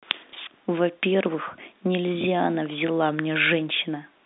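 Packet loss with last packet repeated occurs from 0.30 to 0.33 s. About 30 ms of audio went missing and the receiver filled the gap by replaying the previous stretch. The single repeat sounds like a small blip over the narrow G.711 telephone band.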